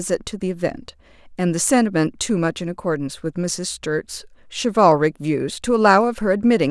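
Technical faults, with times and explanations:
Nothing stood out as a technical fault on listening to this speech recording.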